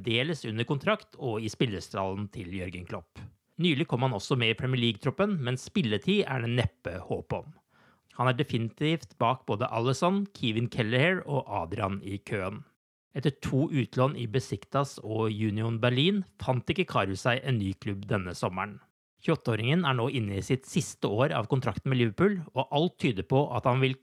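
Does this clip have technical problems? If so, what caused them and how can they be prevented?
No, there are no audible technical faults here: no dropouts, distortion, glitches or level problems are present anywhere in the recording, so there is nothing to prevent.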